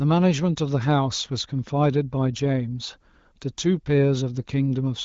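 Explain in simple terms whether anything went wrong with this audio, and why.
Nothing went wrong with this speech recording. It has come through the AMR wideband (HD Voice) phone codec, so nothing is heard above 7.5 kHz and there is a slight coded texture, as expected from that kind of call.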